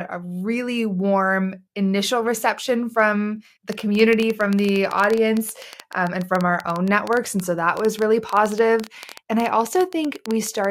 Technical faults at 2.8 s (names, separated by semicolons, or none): none